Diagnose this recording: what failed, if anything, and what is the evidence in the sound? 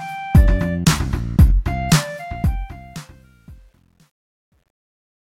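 The fade-out from about 2 s shows truncation distortion in the sample-format conversion or gain stage. From 2.1 s the tail grows grainy, and from 3.05 s to the end it is at its worst, consistent with roughly a 10-bit word without dither. Unlike codec artefacts, the grit tracks falling level alone.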